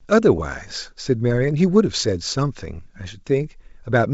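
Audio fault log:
No faults heard in this speech over G.722 wideband coding.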